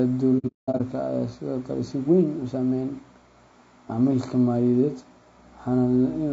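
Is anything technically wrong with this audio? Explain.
Yes. There are two faults.

Throughout the 6-second speech clip, the low-delay AAC compression damage is plainly audible: the voice sounds rough and grainy, with noise between the harmonics and a thin, synthetic top band. This is likely AAC-ELD coding. Its short frames resolve pitch harmonics poorly, and the degree of damage fits a bitrate near 32 kbps.

From 0.38 to 0.81 s there is AAC frame loss with muting. The decoder zeroed the missing frames, and the overlapping windows fade the sound out and back in, leaving soft-edged gaps. About 330 ms of audio disappears in scattered holes, and the longest run lasts about a fifth of a second.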